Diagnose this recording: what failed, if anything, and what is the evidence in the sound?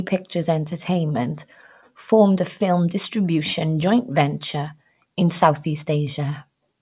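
Nothing failed: no stage of the chain, from capture through playback, leaves any audible evidence in the speech.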